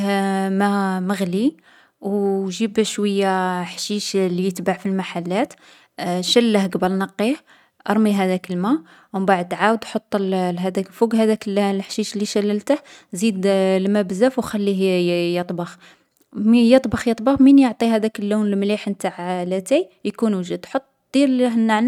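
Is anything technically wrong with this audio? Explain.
No, the speech signal holds steady throughout, with nothing in its level, continuity or tonal balance that points to a technical problem.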